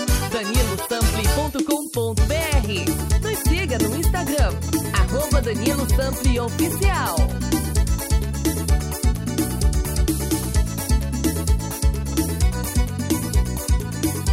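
Nothing is technically wrong with this audio; no faults can be heard at any point.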